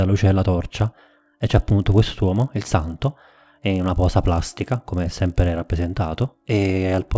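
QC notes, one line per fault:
0.78–7.18 s, resampler restarted on every block: from 0.78 s to the end there's a steady 50 Hz buzz riding on the speech, and it drops away whenever the signal does. The rate converter was run fresh on each 20 ms block, so at every block edge it filled in silence or wrapped-around samples instead of the real neighbours, leaving a small error at each join. Fifty joins a second fuse into a buzz. The audio sounds like a 24 kHz to 16 kHz conversion.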